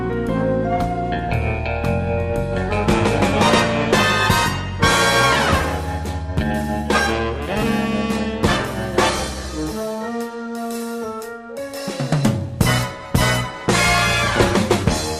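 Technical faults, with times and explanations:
No technical faults can be heard anywhere in this audio. Nothing in it calls for a time or an explanation.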